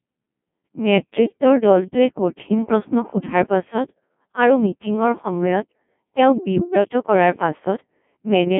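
The speech in this clip has been through a Codec 2 vocoder for its whole length. No original waveform survives: the decoder rebuilds the voice from sine waves driven by pitch, voicing, energy and a coarse spectral envelope, which makes it robotic and buzzy. The damage is heavy, which points to a very low rate near 1.2 kbit/s. The audio sits in a narrow 150 Hz to 3.4 kHz line band, with nothing above 3.7 kHz.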